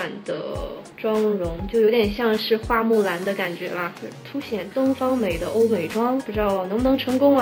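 A crude rate conversion from 0.50 s to the end, consistent with 32 kHz to 48 kHz by repeating samples unfiltered, leaves an inharmonic fizz about 30 dB below the audio.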